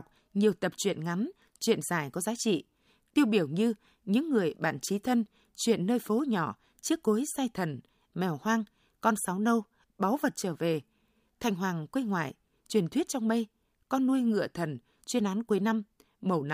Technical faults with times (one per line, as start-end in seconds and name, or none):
none